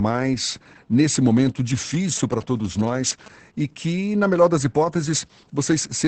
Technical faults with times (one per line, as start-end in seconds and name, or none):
0.00-6.07 Opus voice compression
1.94-3.28 GSM signalling bursts